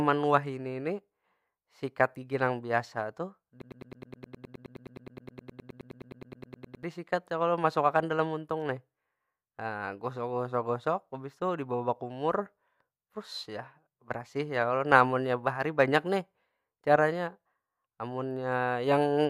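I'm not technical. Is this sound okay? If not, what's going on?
No. From 3.62 to 6.83 seconds the speech sticks on a scrap about a tenth of a second long and stutters it 31 times. This is a broken-record loop. The player or stream likely stalled and kept replaying its last fragment, so the speech meant for those seconds is lost.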